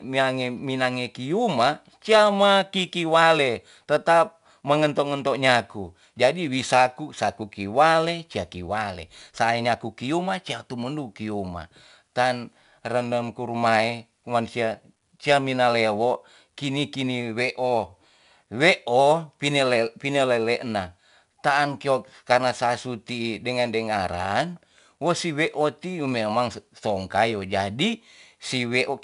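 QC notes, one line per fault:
Throughout: 4-bit ADPCM compression, plainly audible as gritty hiss riding every louder syllable, because each sample is a coarse step from a prediction. Nothing above 10.7 kHz, consistent with about 89 kbps. The spectrogram shows a noise floor that follows the signal level, capped by a flat ceiling.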